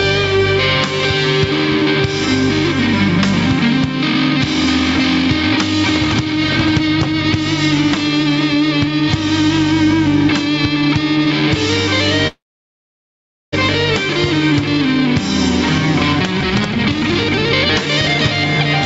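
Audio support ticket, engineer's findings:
Gain pumping, throughout: loud and soft parts pulled closer in level, sound squashed, about 10 dB swing. Likely input gain too hot driving a fast limiter. Gain tracks the signal, unlike steady noise.

Call audio freeze, 12.27–13.54 s: sound stalls, brief fading tail, then about 1.15 s near-silence. Likely jitter buffer ran dry on delayed packets. Resumes where it stopped, nothing lost, unlike a dropout.

Jitter buffer speed-up, 16.12–18.16 s: audio hurried to 154% speed, roughly one second trimmed in small pitch-period cuts. Pitch unchanged, unlike resampling. Band-limited to 8 kHz by the call codec.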